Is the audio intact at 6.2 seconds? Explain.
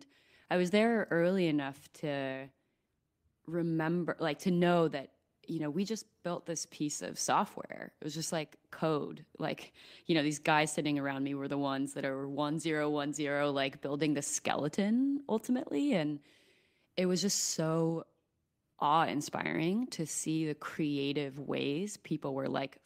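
Yes, at 6.2 seconds the speech plays through intact, with no dropout, click, distortion or other fault to be heard at that moment.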